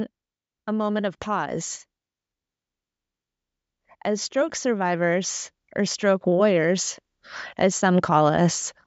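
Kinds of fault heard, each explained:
Automatic gain rising: the gain control, finding the input too quiet, lifts speech and background together by about 6 dB over 4.05–6.92 s, so the waveform envelope widens steadily.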